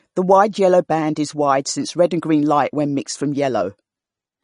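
From start to finish the speech has nothing above about 10.6 kHz, and the remaining upper band sounds watery and swirly, with s sounds turning metallic and chirpy and consonant onsets smeared. This is MP3 compression, likely at a low bitrate around 40 kbps, where the encoder cuts the treble and drops weak frequency lines that flicker from frame to frame. A plain low-pass filter would dull the top evenly, without this shifting, bubbling texture.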